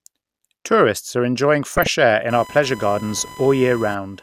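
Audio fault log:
1.76–1.87 s, DAB burbling: right after "are enjoying" the speech briefly burbles as single frequency bands jump in level. A small fraction of a percent of bit errors slipped past error correction into the MP2 data, corrupting samples and scale factors across what sounds like about six frames.
2.30–4.22 s, computer activity noise: a buzzing chirp with a pulse rate around 1 kHz sits about 20 dB below the speech and runs to the end of the clip, unrelated to the speech. Load changes in the computer are disturbing the audio circuit's shared ground.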